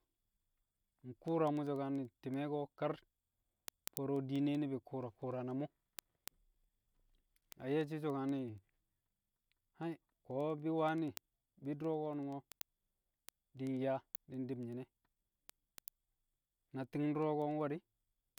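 An unlocked receiving clock, around 200 ppm off, slips one sample about ten times a second, producing steady word clock ticks from 0.13 to 18.38 s.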